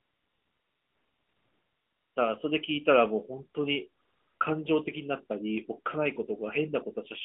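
A speech clip over an AMR narrowband mobile link, band-limited to roughly 200 Hz to 3.5 kHz. The fault is AMR comfort noise: from 0 to 2.16 s and again from 4.02 to 4.40 s, the phone stopped sending speech frames and the receiver filled in smooth synthetic hiss that cuts in and out, replacing the real background.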